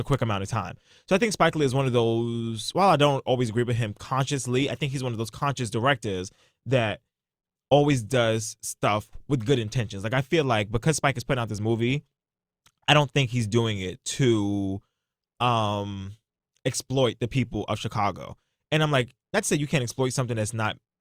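No faults detected anywhere in this speech recording.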